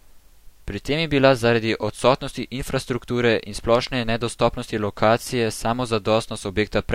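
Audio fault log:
3.75–3.89 s, loud pop. Two sharp pops land in quick succession, peaking a little above the speech. The speech continues underneath. A sudden voltage step, likely from a plug, switch or static, entered the signal and was shaped by later circuits.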